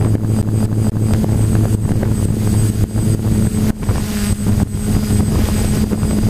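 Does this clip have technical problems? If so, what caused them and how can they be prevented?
Yes. From 0.42 to 1.14 s there's a CD stuck on one turn: the same 0.24 s slice plays three times in a row, with a brief mute at each jump, because a scratch kicks the laser back a track every revolution. Cleaning or resurfacing the disc, or ripping it with an error-correcting ripper, prevents it.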